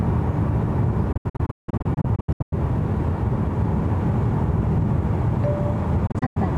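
From 1.12 s to 2.53 s, a digital broadcast dropout punches short holes in the sound. Corrupt frames were muted, about 744 ms in total, longest 168 ms, each fading out within 8 ms. It recurs from 6.07 to 6.37 s, losing 168 ms.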